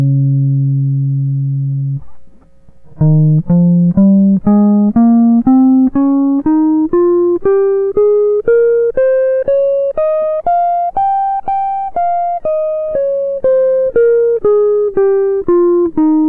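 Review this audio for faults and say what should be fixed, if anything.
Nothing here needs fixing; the music comes through without any faults to flag.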